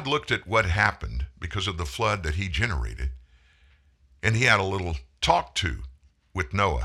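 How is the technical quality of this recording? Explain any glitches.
No audible glitches or faults.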